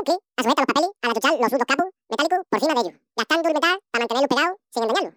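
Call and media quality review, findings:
Audio read two samples at a time (double speed), entire clip. Speech at 2x, pitch up 12 semitones. Likely reader/format parsing: sample pairs consumed as one frame. Unlike a sample-rate mismatch, an exact octave.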